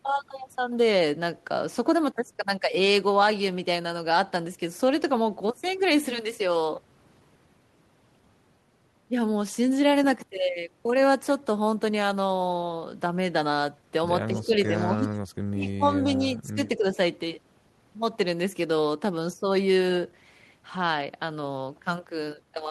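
From 14.33 to 15.13 s the speech drops by about 10 dB in patches, which is likely speech suppressed in double talk, with the canceller ducking its own talker along with the echo; the waveform shows notched, shrunken stretches. Inside that span, from 14.38 to 14.83 s, a faint echo leak follows the speech 223 ms later and about 20 dB lower, likely loudspeaker pickup the canceller missed. On a spectrogram it appears as a pale, time-shifted copy of the harmonic bands. The same suppression returns from 15.54 to 16.98 s, again dipping about 10 dB over much of the stretch. A brief leak from 15.64 to 15.71 s sits about 25 dB down at the same 223 ms delay.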